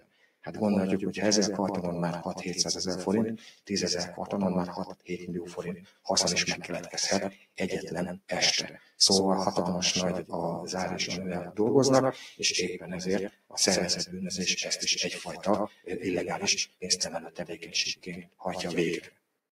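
Throughout, a second full-band copy of the sound follows about a tenth of a second behind at roughly 5 dB lower, with no decay or room colour, likely a doubled audio track from a slower capture path. A speech-oriented noise suppressor also stays active on non-speech material, treating sustained content as noise, so levels pump by about 15 dB and held tones thin out. The sound is cut by the noise suppressor, sinking by up to about 20 dB with tails shortened, at 0.0 to 0.49 s, 3.37 to 9.0 s, 12.13 to 14.14 s and 15.29 to 19.4 s.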